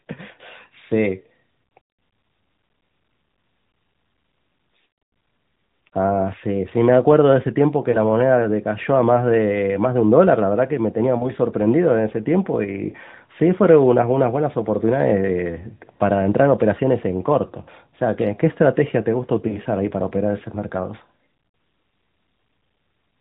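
Lost AMR speech frames occur four times in this narrowband mobile speech, where the sound already stops at 4 kHz and has the light coding colour of about 12.2 kbps AMR-NB. Each time a frame fails its checksum, the decoder repeats the last good pitch and vocal-tract settings at reduced gain. At 7.92 s, 11.18 to 11.29 s and 12.90 s this gives a brief dip or warble, which fits one lost 20 ms frame. At 19.48 to 19.58 s a longer smear fits two consecutive lost frames.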